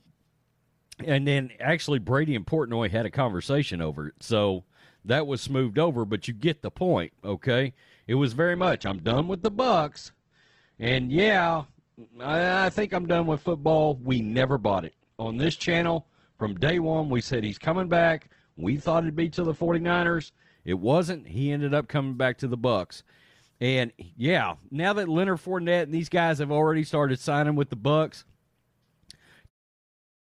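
At 8.55 s, right after "was very", the speech abruptly turns dull, with nothing above about 8.2 kHz and codec artefacts, and it stays that way until 20.55 s, when full quality returns with no gap. This is an adaptive stream at a lower bitrate: a slowed connection made the player switch to a far leaner Opus encode, which fits a drop from around 64 to 12 kbit/s. The fade-out at the very end is a deliberate edit.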